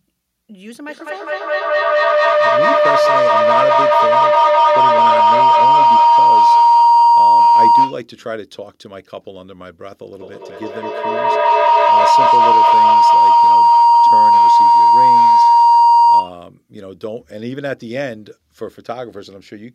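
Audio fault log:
0.88–8.07 s and 10.13–16.42 s, feedback howl: a ringing tone near 1 kHz swells to about 15–16 dB above the speech, pulsing roughly every fifth of a second, as a microphone-to-loudspeaker loop gains level on each pass.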